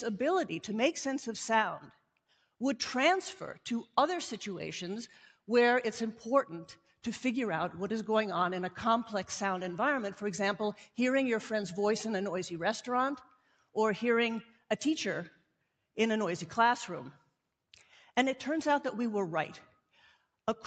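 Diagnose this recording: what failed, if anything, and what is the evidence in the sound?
The call processing's noise suppressor is the culprit: sound cut by the noise suppressor at 1.88–2.45 s, 13.24–13.75 s and 14.46–14.64 s, dipping about 12, 12 and 10 dB. It mistook that material for noise and pulled its gain down. The 8 kHz top end is just the call codec's band limit.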